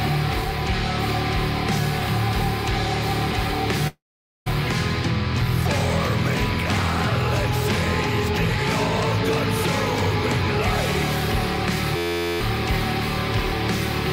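At 3.87 s a long network dropout likely stops the stream: about 580 ms of audio never arrives. The receiver stretches the last sound into a fading buzz, then holds near-silence for roughly 460 ms before the sound resumes at 4.48 s with that stretch missing.

At 11.96 s a system hang loop sets in: the machine stalls while the audio hardware keeps replaying one 11.61 ms slice, which fits a 512-sample buffer. It repeats dozens of times as a steady 86.1 Hz buzz until 12.41 s, and about four tenths of a second of audio is lost.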